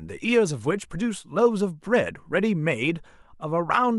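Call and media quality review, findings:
Nothing to flag on this speech recording; no audible problems turned up anywhere in it, so there's no ticket entry to raise.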